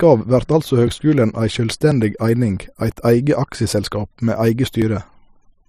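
At 4.82 s the recording software likely failed to collect a buffer before the hardware overwrote it, a dropped buffer (overrun). About 20 ms of speech is missing, and the sound jumps straight ahead with no gap of silence where the two sides are joined.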